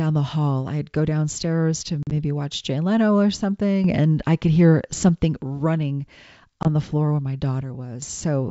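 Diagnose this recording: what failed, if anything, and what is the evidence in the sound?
The network stage failed, causing packet loss on an ADPCM call. At 2.03 to 2.12 s, just after "I'd go downstairs to", hard-edged silent holes appear. About 50 ms is missing, scattered over 80 ms, with the longest gap 40 ms. That fits roughly five lost packets. A shorter 20 ms hole at 6.63 to 6.66 s, just before "the floor where my", fits about two packets. The G.722 decoder's predictor and step size lose track of the sender. The sound returns slightly distorted, then settles.

A sudden gain jump occurs twice, at the call-processing stage. At 3.84 s the level rises by about 7 dB in one step and stays up until 5.36 s. At 7.62 s, just after "the floor where my", it drops by about 8 dB until 8.02 s. Sound and background noise move together, so the change sits after the microphone. The likely cause is a digital gain setting applied instantly, with no ramp.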